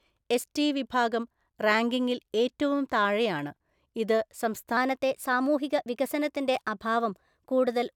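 From 4.77 s to the end, the speech runs about 1.09 times fast and about 1.5 semitones high, slightly hurried and higher. This is a wrong sample rate fault: audio recorded at 44.1 kHz is played at 48 kHz without conversion. On a spectrogram, harmonics and formants shift upward and syllables compress in time.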